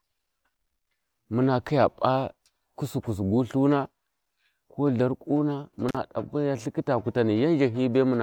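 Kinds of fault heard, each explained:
Intermittent contact: the speech drops out for about 40 ms around 5.89 to 5.97 s, with a crackle at each edge and faint hiss in the gap, as a loose plug or cable briefly breaks the signal path and then reconnects.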